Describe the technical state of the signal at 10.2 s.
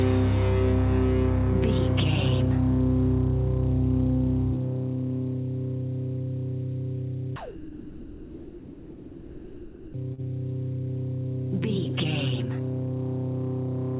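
At 10.14 to 10.20 s there is a short concealed packet loss: about 40 ms never arrived, and the receiver filled it by extending the preceding sound before blending back. Unlike a plain dropout, there is no silent gap, only a brief smear or wobble within the 4 kHz call band.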